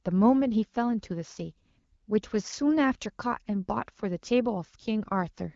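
Speech over an HD Voice link; no faults heard.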